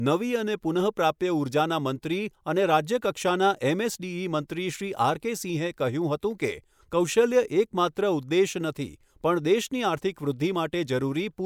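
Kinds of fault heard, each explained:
No audible faults detected.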